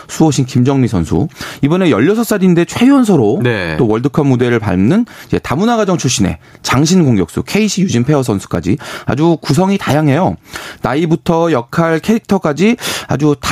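All the way through the speech you get gain pumping: the level drops by something like 15 dB the moment a loud syllable hits. It's likely the mic gain was cranked too high, with a fast limiter clamping down, so everything sounds squashed and breathing.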